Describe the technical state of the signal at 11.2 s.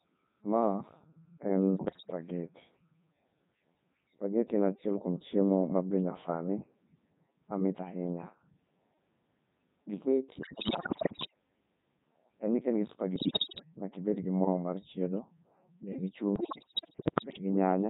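At 11.2 s the signal is near the end of a burst of bit errors on digital voice radio, running from 10.38 to 11.34 s. Roughly one bit in seven arrives flipped, so each frame's pitch, level and voicing parameters decode as nonsense. The result is jumping pitch, bleeps and robotic warble. On a spectrogram the harmonic stacks jump erratically between frames, and the waveform envelope lurches in level.

Underneath, the whole clip passes through the Codec 2 vocoder, heavily damaged. Its sound fits the 3.2 kbit/s mode. The decoder rebuilds speech from sine waves using only pitch, voicing, energy and envelope, which makes it buzzy and synthetic. A spectrogram shows unnaturally regular harmonic combs and smeared noise bands, and the waveform no longer matches the original's shape.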